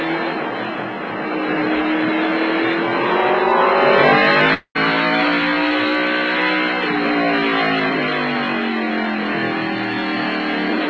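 A long network dropout, likely packets failing to arrive, breaks the audio from 4.54 to 4.77 s. The receiver stretches the last sound into a fading buzz for about 210 ms, then drops to near silence, and the audio resumes with roughly 220 ms missing. Throughout, the G.722 call path caps everything at 8 kHz.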